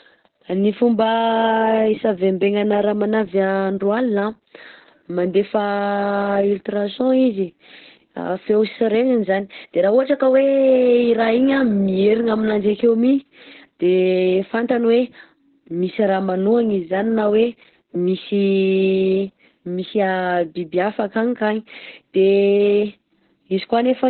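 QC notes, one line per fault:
Throughout, Opus voice compression. The speech is confined to a narrow telephone-like band, with nothing above about 4.2 kHz. That points to the codec's narrowband setting. Consonants lose their crispness and the sound is muffled. Heavy damage to the excitation gives a hoarse, slightly robotic buzz. The coder models the speech with linear prediction and quantises what is left over very coarsely, which fits a very low bitrate of about 8 kbps in SILK mode.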